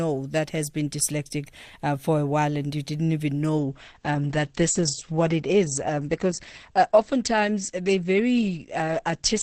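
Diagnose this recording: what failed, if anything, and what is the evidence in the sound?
Adaptive stream at a lower bitrate, from 3.58 s to the end, right after "and you didn't even". A network slowdown forced a switch to a leaner rendition. Without any gap, the speech loses everything above 8.6 kHz, consistent with Opus dropping from about 64 to 12 kbit/s.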